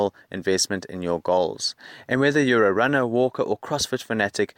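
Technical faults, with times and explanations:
No technical faults are audible in this speech.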